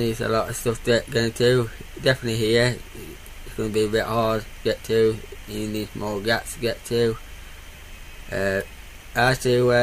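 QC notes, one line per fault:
No fault is heard anywhere in the clip. There is nothing to log.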